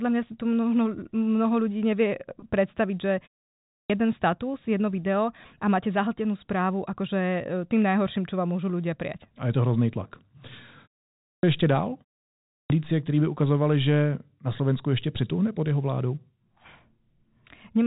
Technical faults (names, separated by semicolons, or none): packet loss with pitch repetition; clipped start after a pause